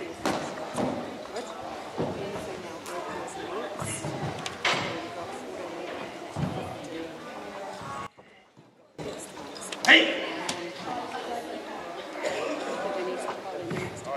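From 8.07 to 8.99 s the sound suddenly drops by about 21 dB, then snaps back. That's the signature of one channel inverted: likely a polarity flip on one side, so whatever both channels share cancels when they're folded to mono, leaving only the faint difference.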